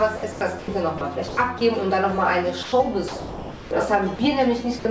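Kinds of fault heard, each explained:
Sound chopped by the voice detector: The sender's voice detector likely kept toggling between sending and muting, once between 0.17 and 0.68 s and again between 1.28 and 1.61 s. Stretches totalling 240 ms and 120 ms were replaced by comfort noise. The sound stutters in both spans, all within a band that stops near 8 kHz, as a G.722 call path would.
Sound dropped by the voice detector: Five times, the detector likely judged the sound to be background and stopped sending, so the receiver filled the gap with comfort noise. The sound vanishes briefly at 0.98 s, at 2.63 to 2.72 s, at 4.16 s and at 4.79 to 4.85 s. The longest gap runs from 3.08 to 3.71 s, where about half a second of sound gives way to steady noise before transmission resumes.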